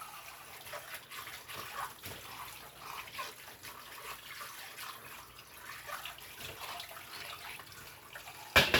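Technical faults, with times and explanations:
1.03 s, lost LE Audio frames: a 7.5 ms gap in the Bluetooth LE Audio stream, which fits a single lost frame, was filled by the LC3 decoder replaying the previous spectrum with randomised signs, so the sound briefly turns into a noisy smear rather than dropping out.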